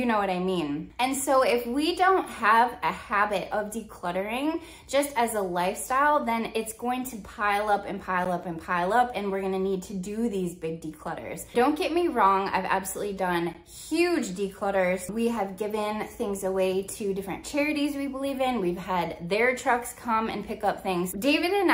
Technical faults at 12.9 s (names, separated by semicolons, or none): none